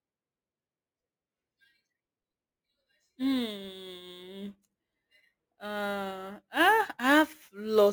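From start to finish the speech carries a crude rate conversion artefact: a gritty fizz riding on the louder and brighter syllables. The resampling was done by grabbing the nearest existing sample instead of filtering, which fits a jump from 32 kHz up to 44.1 kHz. That repeating timing error throws off tones unrelated to the speech, sitting roughly 25 dB below it, so you catch it most on sibilants and stressed vowels.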